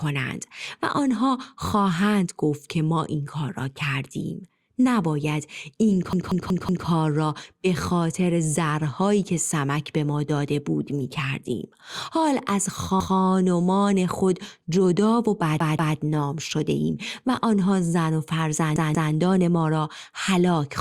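In this speech, a repeated buffer occurs: fresh audio arrived late, so the last 0.19 s block (which fits an 8192-sample buffer) replayed, stuttering at 6.13, 13.00, 15.60 and 18.76 s, repeating up to four times.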